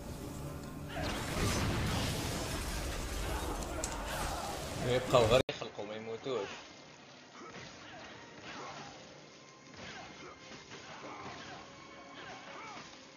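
At 5.41 s the sound cuts out for 80 ms, then resumes duller and boxier, with nothing above 6.8 kHz, a level roughly 10 dB lower, and a faint new background noise sitting well below the signal. This persists to the end. The likely cause is the input switched to a poorer device mid-recording, such as a different microphone or a headset's call profile, whose narrower bandwidth, quieter gain and own noise floor replace the original path.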